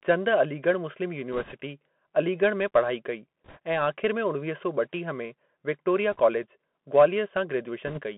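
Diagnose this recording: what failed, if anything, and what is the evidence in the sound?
Codec stage: the speech runs through a Bluetooth CVSD headset codec, squeezed to roughly 200 Hz–3.4 kHz, with scratchy s sounds and a granular hiss from the adaptive one-bit stepping.

Radio link: bit errors on the Bluetooth voice link cause rushing crackle at 1.32–1.54, 3.44–3.59, 6.12–6.20 and 7.87–8.01 s. There are no hard clicks, since each flipped bit only nudges one small step.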